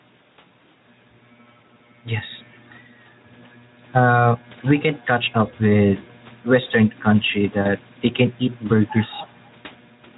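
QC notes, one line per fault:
Throughout, gain pumping: the level ducks each time the speech gets loud, with a swing of roughly 5 dB, so the level feels squashed. That's likely mic gain set too hot with a fast limiter clamping down on every peak.
7.61 s and 9.21 s, VoIP packet loss concealed by the speech codec: brief gaps of about 40 ms before "they can eat" and 20 ms later, fitting two frames and one frame lost. The decoder fills them by stretching the last sound into a fading fill, and the voice stays weak just after.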